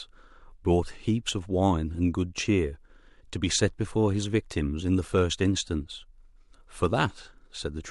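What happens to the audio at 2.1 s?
Nothing goes wrong at 2.1 s; the speech continues without any dropout, click or distortion at that point.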